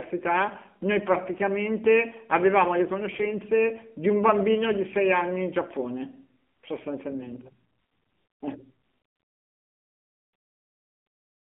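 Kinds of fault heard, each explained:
AMR narrowband mobile codec: The speech has gone through the AMR-NB mobile phone codec throughout. This codec rebuilds the voice from a vocal-tract model driven by a few pulses per short frame, rather than keeping the waveform itself. Only the band from 200 Hz to 3.4 kHz survives, so the voice sounds thin and boxed in, with no air at the top. The damage is plainly audible as a buzzy, synthetic edge, which fits a low mode near 7.4 kbps.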